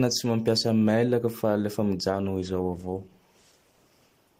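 Right after "fa lefa", at about 2.1 s, there's a call bitrate drop that lasts to the end of the clip. The call's bandwidth estimate fell, so the encoder was squeezed onto far fewer bits and started coding the speech much more coarsely. You can hear it turn rough and watery, and it sits at its worst for roughly the last 1.8 s. That sound fits a fall from around 32 kbps to about 14 kbps.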